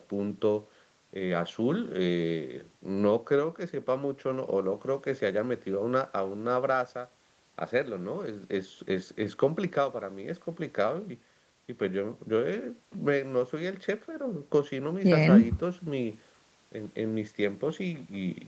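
No technical faults can be heard in this speech recording, which carries the ordinary signature of a call path: nothing above 8 kHz, and the coding texture of a wideband call codec that fits Opus at 24 kbps.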